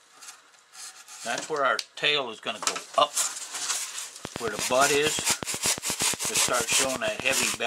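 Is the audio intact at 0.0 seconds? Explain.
Yes, the audio is intact at 0.0 seconds, with no fault present at that moment.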